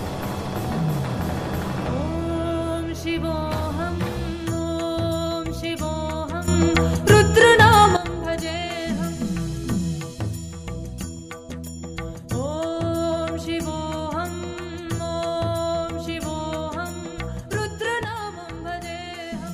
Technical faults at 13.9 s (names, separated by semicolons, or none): none